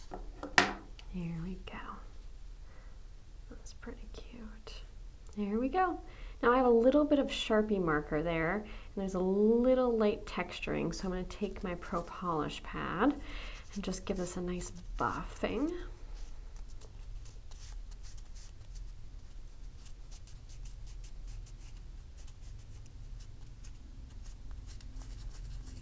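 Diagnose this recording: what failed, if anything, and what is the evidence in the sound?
Nothing failed in this recording, and the sound gives no evidence of any fault.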